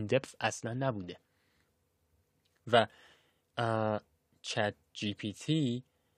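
No technical faults are audible.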